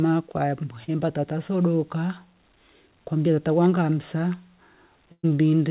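A speech recording carried over a narrowband call path, with nothing above 4 kHz, consistent with G.711 A-law at 64 kbps. At 0.84 s a short concealed packet loss leaves about 40 ms missing, patched by roughly 37 ms of continued sound. It passes as a brief smear rather than a gap, because the fill is short and never fades away. At 5.12 to 5.25 s a burst of packet loss is different: about 120 ms is missing, and the concealment stretches the last sound for roughly 115 ms while turning it down into about 60 ms of silence before the audio resumes further on.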